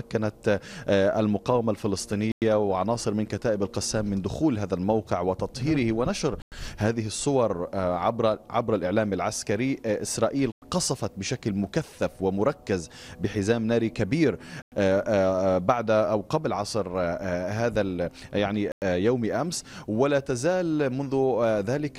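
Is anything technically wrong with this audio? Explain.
Yes, there are gaps between chunks. The audio was delivered in 4-second chunks with 100 ms of silence inserted at each join, giving short dropouts at 2.32, 6.42, 10.52, 14.62 and 18.72 s.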